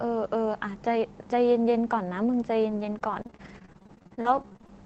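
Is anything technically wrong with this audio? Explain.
Yes. From 2.69 to 4.70 s the speech suffers repeated packet loss, giving a robotic sound. Short holes keep opening, about two dozen of them, the longest 33 ms. The receiver fills each hole by stretching the last sound it had, and then the next hole arrives. About a quarter of the stretch is patched this way, roughly 300 ms of rebuilt audio. The result is choppy speech with bits missing.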